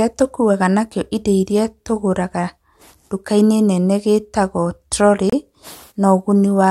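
At 5.30 s, just after "nene gĩĩtagwo trori", the speech drops into a hard-edged hole of dead silence lasting until 5.33 s, about 29 ms, and then resumes abruptly. This is a gap between stream segments. The timestamps of two consecutive segments, which fall on boundaries that point to 2-second segments, leave a short empty span between them, and the player fills it with silence. Nothing is removed; the speech simply arrives that much later.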